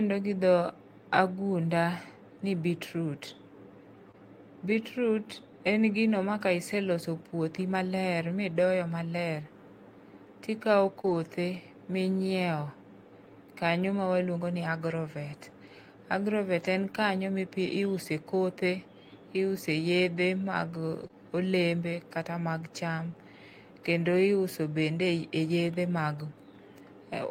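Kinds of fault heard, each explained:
Short concealed packet loss: at 4.11–4.16 s, 11.02–11.06 s and 21.08–21.15 s, about 20 ms of speech arrived too late or not at all, and the receiver extended the previous sound to cover each gap. This shows up as a brief smear or wobble, with two back-to-back holes just before "olembe kata".
Lost packet rebuilt from error correction: at 11.06–11.16 s (three packets, 60 ms), at 16.64 s just before "en kanyo", and around 21.04 s, the decoder played the low-bitrate copies carried by the following packets. There is no gap, but those stretches sound rougher and noisier.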